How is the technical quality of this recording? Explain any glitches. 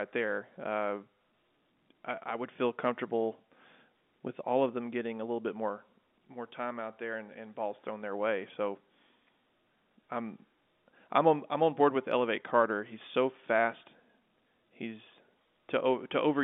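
Listening through this telephone-band speech recording, nothing stood out as a technical problem worth flagging.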